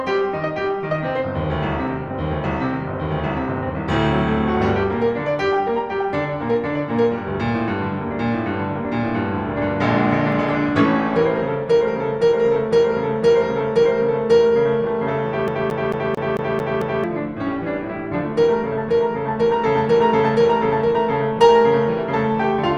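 A CD stuck on one turn appears from 15.48 to 17.04 s: the laser jumps back each revolution, repeating one 0.22 s slice of music seven times with brief mutes.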